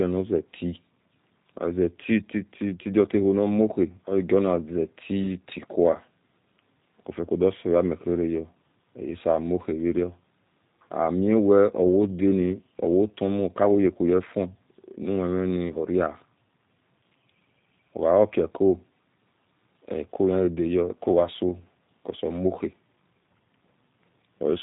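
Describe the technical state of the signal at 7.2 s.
At 7.2 s the speech carries G.729 codec damage, present across the whole clip rather than at that moment alone. The speech is rebuilt from a vocal-tract filter, a pitch predictor and a few pulses per frame, so it sounds slightly rough and synthetic, consistent with an 8 kbit/s G.729A stream. Nothing above 3.8 kHz survives. A plain telephone-band filter would muffle the sound just as much but leave the remaining band clean, without this buzzy, synthetic grain.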